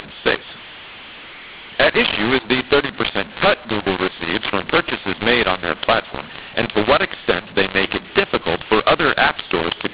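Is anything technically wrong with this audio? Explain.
Yes. Throughout the speech there is a mu-law and A-law mix-up: samples encoded as A-law are being decoded as mu-law. The mismatched companding curve scrambles levels, making the speech harsh and distorted, and lifts the quietest samples so pauses fill with noise, over an otherwise normal 8 kHz-sampled telephone signal band-limited to 4 kHz.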